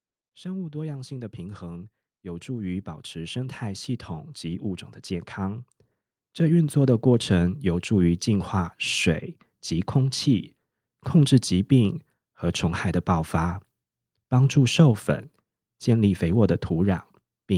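Automatic gain rising at 0.42–1.45 s, 2.23–3.99 s and 6.36–8.19 s lifts the level about 5–6 dB. Background noise swells with the speech, unlike a talker simply getting louder.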